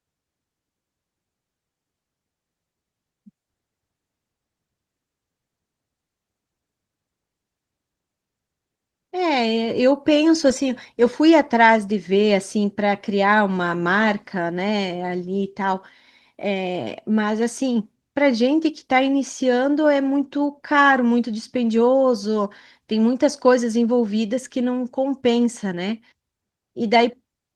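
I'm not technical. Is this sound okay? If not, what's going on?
Yes, nothing is wrong here.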